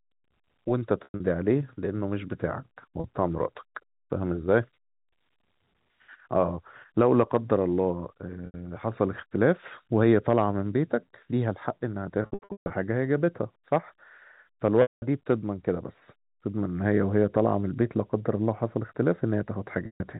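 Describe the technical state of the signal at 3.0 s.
From 3.0 to 3.04 s, about 40 ms of packet loss with pitch repetition (likely two 20 ms packets): the receiver loops the last pitch period, producing a brief buzzy, held tone rather than a silent gap.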